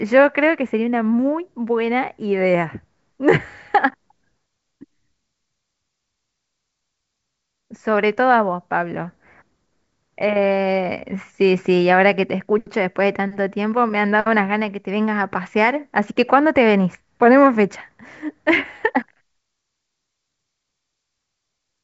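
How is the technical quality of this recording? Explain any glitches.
No glitches to report: the speech sits in a G.722 wideband telephone channel with little above about 7 kHz, which fits the codec's full 64 kbit/s mode.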